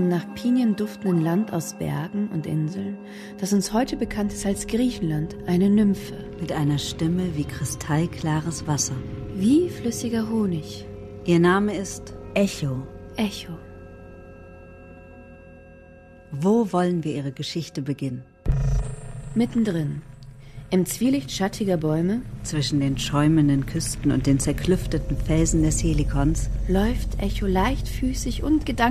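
No technical faults can be heard anywhere in this clip.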